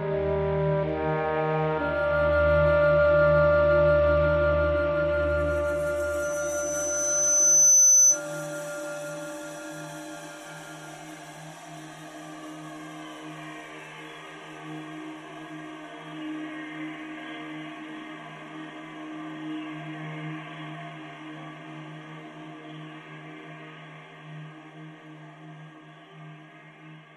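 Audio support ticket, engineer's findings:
Loudspeaker feedback squeal, 6.22–8.21 s. Tone at 6.1 kHz swells over roughly 1.5 s to about 10 dB above the audio. Mic hears its own speaker; loop gain exceeds one there. Spectrogram: lone horizontal line, brightening as it builds.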